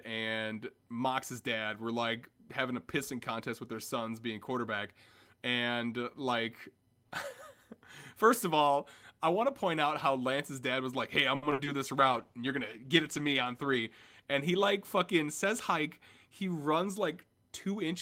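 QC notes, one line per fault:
11.35–11.68 s, repeated packet loss (robotic sound): the speech turns choppy, with pieces dropping out. Four gaps hit this third of a second, the longest 70 ms; the receiver stretched the last sound over 150 ms of it, covering nearly half the span, and 100 ms simply went missing.
12.01–14.33 s, call bitrate drop: the voice goes rough and watery, losing some crispness. The bandwidth estimate fell and the encoder was pushed from 32 kbps down to 15 kbps, holding that floor for about 2.25 s, so detail is coded coarsely until the rate recovers.
14.26–15.45 s, jitter buffer speed-up: the speech sounds a little hurried while its pitch stays unchanged, running at 105 % speed. The buffer had built up excess delay and trimmed it by cutting short pitch-period pieces over and over, removing around 70 ms in total.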